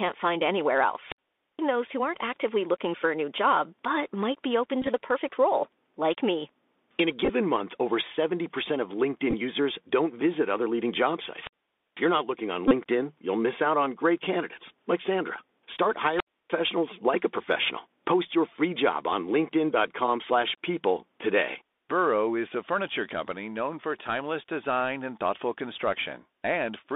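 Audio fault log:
throughout: Bluetooth CVSD headset codec. A one-bit up/down coder whose step size chases the waveform, which fits 64 kbps CVSD, squeezes the speech into a 250 Hz to 3.6 kHz band. Fast, loud high sounds outrun the step and distort, s sounds turn scratchy, and granular hiss sits underneath.
1.03–1.64 s, 11.21–12.23 s, 16.08–16.57 s: wireless microphone squelch dropout. The radio link faded and the receiver's squelch shut the output. Each event brings a short surge of hiss or static, then near silence of about 470 ms, 500 ms and 300 ms respectively, before the speech returns.
4.81–4.88 s, 7.25–7.30 s, 9.30–9.34 s, 12.68–12.73 s: Bluetooth headset packet repeated. Lost voice packets were replaced by decoding the previous packet again, cycling every 3.75 ms. The longest runs of roughly 10 to 15 ms are heard as a brief buzz near 267 Hz, scattered through 45 ms, 26 ms, 19 ms and 30 ms of lost audio.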